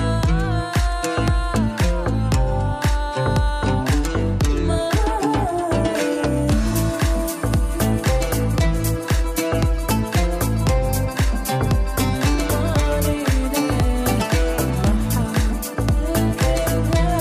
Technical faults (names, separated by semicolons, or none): none